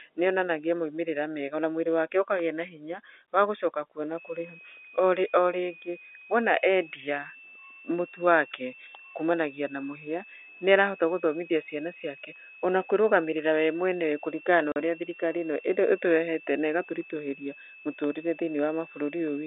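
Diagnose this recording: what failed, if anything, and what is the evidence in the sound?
A switching supply whistle enters the analogue path at 4.18 s, just after "wa gũcoka kuo na", and runs to the end. It is a thin tone that wanders between 2.46 and 2.71 kHz, roughly 25 dB under the speech. A power converter is running in audible burst mode or beating with another one, and its pitch shifts with load. That drift sets it apart from mains hum or a fixed feedback tone.

A network packet loss filled with silence cuts the speech from 14.72 to 14.76 s. The hole lasts 40 ms, which fits two lost 20 ms packets, and it has hard edges. Concealment would smear or repeat the sound. Here the receiver inserted plain silence instead. The G.711 telephone band, 300 Hz to 3.6 kHz, passes unchanged on both sides of the gap.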